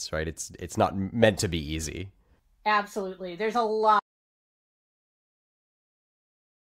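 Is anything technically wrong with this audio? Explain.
Yes. From 4.00 s to the end of the clip the speech stops abruptly and is replaced by an audio dropout to silence. The input was likely lost, through a disconnected device, a failed link or an accidental mute, while recording or encoding carried on writing silence. The cut is mid-flow rather than a natural pause, and the remaining stretch is silence with no room tone or noise floor, so whatever followed is missing.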